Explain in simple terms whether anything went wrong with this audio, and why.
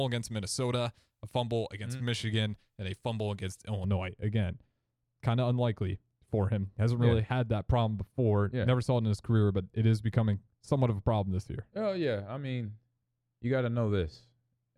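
From 3.84 seconds, just after "and a fumble against", the speech turns dull and muffled until the end. The cause is de-emphasis applied wrongly. A treble cut meant to undo an earlier boost was used where no boost existed or was applied twice, so the crisp high sounds lost their brightness.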